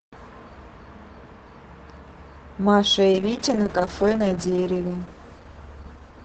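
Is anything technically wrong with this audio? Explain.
Yes. From 3.12 s to the end, a call bitrate drop occurs. Starved of bits, the encoder codes coarsely and trims highs. Speech turns rough and muffled, worst for about 1.36 s, which fits a fall from 32 to 7 kbps.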